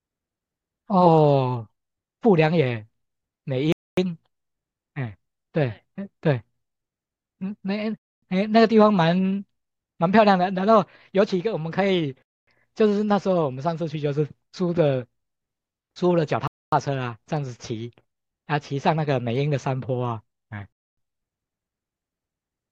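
The speech was delivered in 4-second chunks with 250 ms of silence inserted at each join, a gap between chunks. Sound stops dead at 3.72, 7.97, 12.22, 16.47 and 20.72 s, leaving hard-edged quarter-second holes that recur every 4.25 seconds before the speech resumes.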